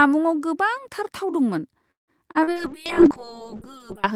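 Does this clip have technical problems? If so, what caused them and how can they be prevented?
Yes. Three kinds of fault can be heard in this speech clip.

Call audio freeze: From 1.91 to 2.11 s, right after "गोबांथार थाव दंमोन", the sound stops moving. The last sound is stretched into a brief buzz and then falls to near-silence for about 150 ms. The likely cause is packets held up in transit, which left the jitter buffer empty. When they arrived, speech resumed where it had stopped, so about 163 ms was inserted and nothing was lost. On a spectrogram this shows as a frozen, fading smear and then a blank strip. Prevention: use a steadier network path, or an adaptive jitter buffer with more headroom.

Short concealed packet loss: Two overlapping losses follow, from 2.32 to 2.50 s and from 2.43 to 2.50 s, still shortly after "गोबांथार थाव दंमोन". Each removed about 40 ms of real audio. The decoder patched the holes with 30 and 38 ms of continued sound and then crossfaded back, which adds a little extra length. 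The result is a quick smear or wobble. On the waveform it appears as a short, overly regular stretch, and on the spectrogram as blurred harmonics. Prevention: enable forward error correction or redundancy, and reduce packet loss on the link.

Call bitrate drop: From 2.55 s to the end at 4.14 s, the encoder's rate falls from 32 to 7 kbps and stays at the minimum for about 1.5 s. This happened because the call's bandwidth estimate collapsed. With so few bits, Opus codes the speech coarsely and removes the upper frequencies, so the voice turns muffled and watery. A spectrogram shows the high band suddenly empty above a flat ceiling, with grainier detail below it. Prevention: give the call a more stable uplink, or set a higher minimum bitrate.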